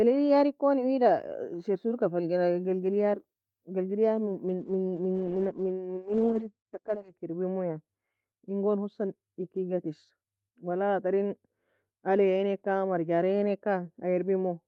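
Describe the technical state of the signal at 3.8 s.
At 3.8 s the speech is intact, with nothing beyond the ordinary character of the call path it came through, whose coding keeps the top of the spectrum capped at around 12 kHz.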